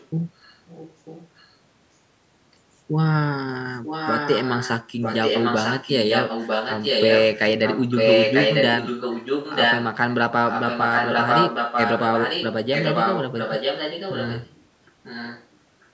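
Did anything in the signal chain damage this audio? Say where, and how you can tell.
Yes. Echo leak appears at 0.0 to 1.55 s, 3.83 to 9.86 s, 10.48 to 14.56 s and 15.03 to 15.47 s. A second copy of the speech trails the original by about 945 ms. It is faint in the first and last stretches and roughly as loud as the direct speech in the two long middle ones. That points to call processing, likely a loudspeaker end whose echo canceller failed to remove what its microphone picked up, so the residue was sent back.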